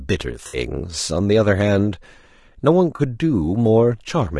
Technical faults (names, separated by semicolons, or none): low-delay AAC compression; AAC frame loss with concealment